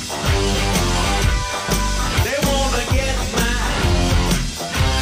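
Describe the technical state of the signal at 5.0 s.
Damaged data in a compressed stream spans 4.97 to 5.01 s. Corrupt frames break the decoder's sync, leaving a brief chirp, squawk, click or hole, seen as a short disrupted patch on the waveform and spectrogram.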